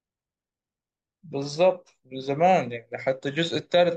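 No technical faults occur at any point in the speech, so there is nothing to describe in time order.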